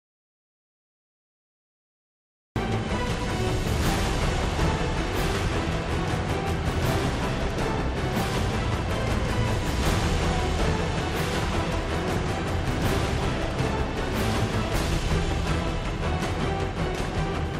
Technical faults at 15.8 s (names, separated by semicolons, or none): none